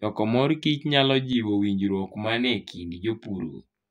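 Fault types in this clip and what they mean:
Channel delay (comb filtering): from 1.33 s to the end, one channel of the speech runs late by roughly 20 ms, and when the two channels are folded to mono, the shared content cancels at a series of evenly spaced frequencies. The first notch sits down around 30 Hz, with more notches repeating regularly above it. The result is a rough, slightly doubled quality that stays for the rest of the clip.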